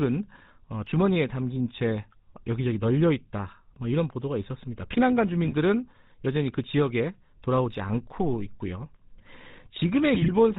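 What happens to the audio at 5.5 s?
From 5.44 to 5.53 s, roughly 90 ms, the speech breaks up with GSM bit errors. Corrupted bits are reaching the decoder, which fits an error rate of around 3 percent across about four 20 ms frames. Wrong filter, pitch and gain values reshape the spectrum and throw the level around, so the sound turns into a brief squawk and gargle with popping jumps in loudness. Packet loss would leave silence or a smoothed-over gap instead. Here the decoder keeps producing sound, just mangled.

Beneath that burst, and across the whole clip, runs the GSM full-rate codec, with plainly audible damage consistent with a 13 kbps stream. The vocal tract is modelled and driven by regularly spaced pulses from a thinned-out excitation, and nothing above 4 kHz survives. This gives a steady buzzy, gravelly roughness. Simple band-limiting would only sound muffled, but this has a constant grainy texture, and it sits under the glitch at 5.5 s as well.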